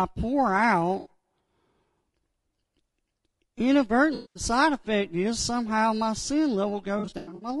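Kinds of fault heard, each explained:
low-delay AAC compression: Throughout, the speech sounds rough and grainy, with plainly audible codec damage. Hiss fills the gaps between pitch harmonics and the top band sounds thin and synthetic. This is likely AAC-ELD at a low bitrate, around 32 kbps. On a spectrogram, the harmonic stripes look blurred, with a raised noise floor between them and a patchy, blocky upper band.
AAC frame loss with concealment: The decoder lost stretches of audio and patched them using the last good spectrum. At 0.99 s a 60 ms gap becomes a brief smeared, phasey blip. From 4.15 to 4.43 s about 200 ms is filled with a noisy, decaying smear. From 6.99 to 7.49 s, 260 ms of losses spread over about 420 ms give broken, fluttering patches, the longest about a tenth of a second. Spectrograms show frozen or noisy columns where detail vanishes.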